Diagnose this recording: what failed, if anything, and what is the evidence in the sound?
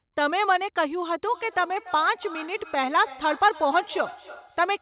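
What failed is a feedback echo between two devices, at the call-processing stage. From 1.25 s to the end, the speech comes back at a steady spacing of about a third of a second, sitting roughly 18 dB below the direct sound, thinner and ringier each pass. A second device in the room is replaying the far end into a nearby microphone, and neither echo canceller knows about the other's loudspeaker. The narrowband sound, with nothing above 4 kHz, fits a G.711 call path.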